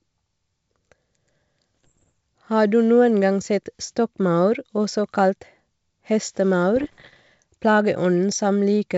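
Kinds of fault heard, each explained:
Bit errors on an ADPCM link: Flipped bits reach the G.722 decoder. Each one upsets its step size and predictor, so the damage rings on briefly. Pops and rough bursts with jumping level appear from 1.75 to 2.10 s and from 6.76 to 7.21 s. The second burst is denser.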